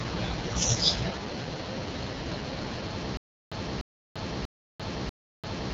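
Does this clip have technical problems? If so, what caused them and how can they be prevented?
Yes. Throughout, the speech has the rough, raspy texture of the AMR wideband (HD Voice) codec at its bottom rate, which fits the 6.6 kbit/s mode, with nothing above 7.6 kHz. Unlike narrowband telephone coding, the top isn't cut at 3.4 kHz, but the pulse-driven model leaves heavy grit. Using 12.65 kbit/s or higher prevents this.

From 3.17 s to the end there is a stutter with silent gaps: a 0.30 s fragment repeats four times, each followed by 0.34 s of digital silence, every 0.64 s. The silence separates it from a seamless loop. The cause is likely a stalled stream replaying its last buffer. A larger jitter buffer would prevent it.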